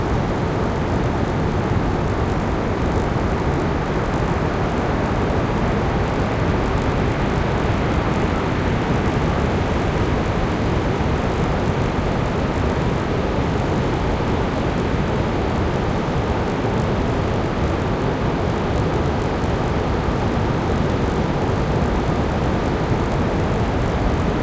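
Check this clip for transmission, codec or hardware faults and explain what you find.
A low, steady buzz rides on the sound from start to finish, strongest whenever there is signal and falling away in quiet stretches. Its pitch sits at 50 Hz, a rapid train of tiny ticks fused together. This is a resampler restarted on every block: the audio was rate-converted in 20 ms pieces, which fits a conversion from 44.1 kHz down to 16 kHz, with each piece handled in isolation. At every block edge the converter lacked the true neighbouring samples, leaving a small error 50 times a second.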